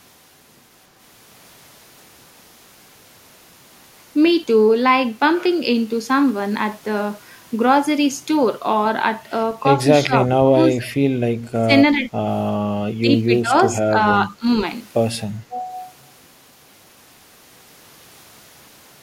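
Speech suppressed in double talk hits this speech recording at 10.06–10.91, 11.56–11.72, 12.84–13.53, 13.81–13.97, 14.26–14.46 and 15.48–15.67 s, with the voice dipping by up to about 30 dB, likely because an echo canceller mistook overlapping far-end talk for echo and attenuated both. An echo leak at 13.7 s brings back a brief copy of the voice about 343 ms late and roughly 15 dB below it, likely residual loudspeaker pickup that the far end's canceller failed to remove.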